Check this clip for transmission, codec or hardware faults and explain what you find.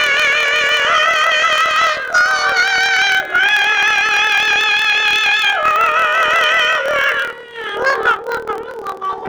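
One fault runs through the whole clip: planar audio read as interleaved. Each block of about 26 ms stores all left-channel samples and then all right-channel samples, but playback takes them as alternating left/right pairs. Every block is therefore squeezed to half its length and played twice, left half then right half, so the overall pace holds while the pitch jumps a full octave (12 semitones). The block boundaries add a rough, buzzing flutter at about 38 Hz across the sound.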